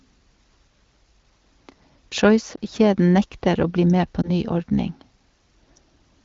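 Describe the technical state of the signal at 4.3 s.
At 4.3 s the tail end of a lost AMR speech frame event, spanning 4.22 to 4.30 s just after "nekter å bli med", is still audible. A frame failed its checksum, so the wideband decoder filled the gap from the previous frame's pitch and vocal-tract settings at reduced gain. The result is a brief dip or warble, consistent with one missing 20 ms frame.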